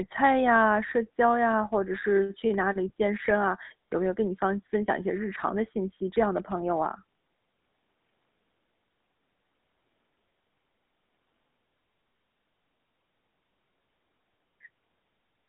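Speech heard through a GSM full-rate codec for the whole clip. The voice has a buzzy, gravelly roughness from pulse-driven vocal-tract coding, consistent with the 13 kbps GSM coder. The band runs from 150 Hz to 3.7 kHz, with nothing above 3.8 kHz.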